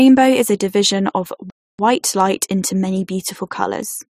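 At 1.5 s the speech stops dead, right after "is a division of". Silence holds for about 0.29 s, until 1.79 s. The sound then resumes with "light into many". This is a playback stall. The break falls mid-phrase, with no fade either side. Nothing in the sound itself explains the pause. The likely cause is the player running short of data, or its thread being held up, so the output went quiet until it caught up.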